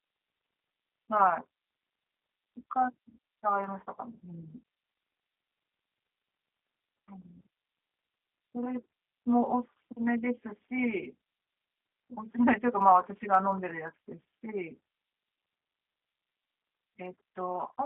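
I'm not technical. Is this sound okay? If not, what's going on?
No. The speech has been through the G.729 codec, a phone-call compression that rebuilds a voice from a rough model instead of sending the actual sound. From start to finish, nothing above about 3.7 kHz remains, so it sounds thin and boxy, and the voice has a plainly audible rough, slightly artificial texture. A plain phone-line bandwidth limit would sound equally narrow but smooth. That buzzy, synthetic grain is what points to this codec.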